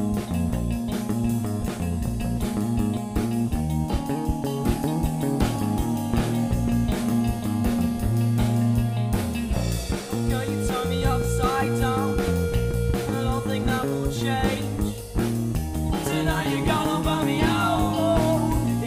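Nothing stood out as a technical problem on listening to the clip.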